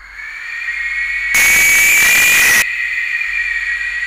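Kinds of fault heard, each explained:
Float read as integer: likely 32-bit float samples were interpreted as 32-bit integers, turning 1.35 to 2.62 s into a harsh, near-square, very loud signal.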